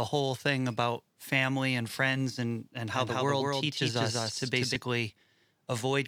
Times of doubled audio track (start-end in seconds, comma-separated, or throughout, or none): 2.94-4.76